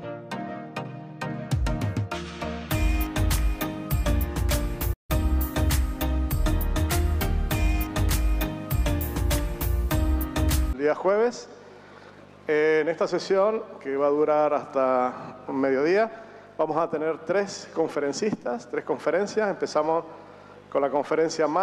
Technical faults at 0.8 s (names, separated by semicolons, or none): none